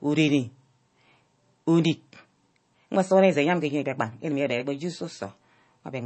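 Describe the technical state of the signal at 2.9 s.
MP3 compression artefacts are present at 2.9 s, as they are across the whole clip, likely from a low-bitrate encode around 32 kbps. The encoder has cut everything above 8.3 kHz and is dropping weak frequency lines frame to frame, giving the speech a plainly audible watery, swirling texture.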